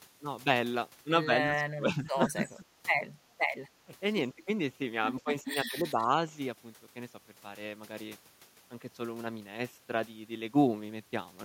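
Speech suppressed in double talk at 1.46–1.57, 1.74–2.64, 3.19–3.23, 3.63–3.69, 4.35–4.47 and 5.2–6.09 s: the voice dips about 15–20 dB, likely an echo canceller ducking it during overlap, visible as faded spectrogram patches and shrunken waveform envelope.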